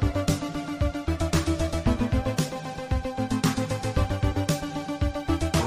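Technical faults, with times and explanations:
No technical faults are audible anywhere in the clip; the signal holds steady, with no interruptions, level disturbances or added noise.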